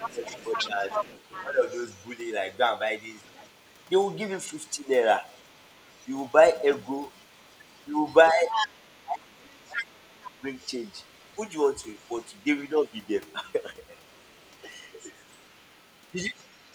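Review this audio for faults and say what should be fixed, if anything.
A second voice, the other side's voice leaking through, runs faintly under the talker for the whole clip, roughly 20 dB below the main speech. The likely cause is a loudspeaker feeding back into the microphone with the echo canceller leaving residue. On a spectrogram it shows as a weaker second set of harmonic striations in the gaps between the talker's syllables. Retuning or replacing the echo canceller, or having the talker use a headset, would prevent it.

Speech suppressed in double talk appears in three places: 0.15 to 1.62 s, 8.33 to 10.46 s, and 16.13 to 16.18 s. The talker's level dips by around 10 dB in the first, as much as 25 dB across about a second in the second, and a few dB in the brief last one. The likely cause is the canceller attenuating everything while both sides spoke. The waveform shows sudden envelope notches. 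A canceller with better double-talk detection would avoid this.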